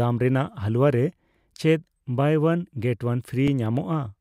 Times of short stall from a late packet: none

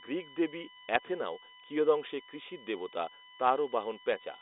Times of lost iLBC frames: none

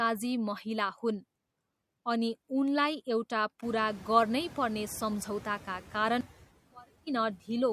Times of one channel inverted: 6.21-7.07

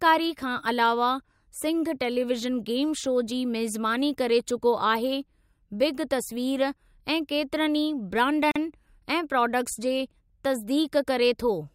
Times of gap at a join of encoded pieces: 8.51-8.56

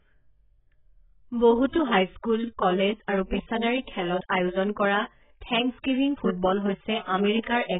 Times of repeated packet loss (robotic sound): none

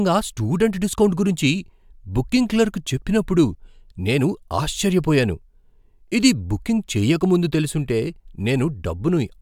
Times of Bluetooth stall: none

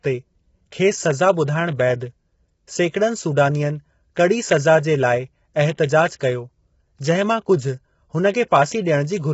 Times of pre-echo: 6.19

